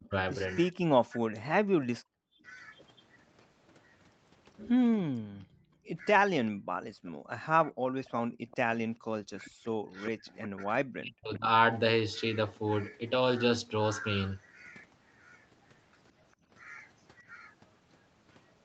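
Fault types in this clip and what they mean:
Speech suppressed in double talk: The talker's own speech dips and breaks up while the far side is also talking. This happens from 0.0 to 2.03 s, from 5.15 to 7.72 s, and from 9.45 to 11.47 s. The deepest cuts are around 40 dB, so parts of the sound nearly vanish. The longest damage is in the last stretch, about a second in total. The likely cause is an echo canceller that mistook the talker for loudspeaker echo and turned both down.
Background gated by the echo canceller: The room sound behind the speech drops out in short holes while the loudspeaker is playing. The canceller clamps the microphone, then lets go and the background returns. A brief gap appears from 2.31 to 2.43 s, about 38 dB deep. Between 5.49 and 8.48 s the gating affects roughly 0.7 s in all, and is about 40 dB deep. A shallower dip of about 19 dB follows at 16.36 to 16.49 s.
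Echo leak: A delayed copy of the speech comes back about 0.4 s after the original. From 2.75 to 3.72 s it is very faint, roughly 35 dB below the speech. From 8.06 to 10.48 s it is much clearer, roughly 20 dB down. This is likely residual loudspeaker sound on one side that its echo canceller failed to remove, which was then sent back into the call.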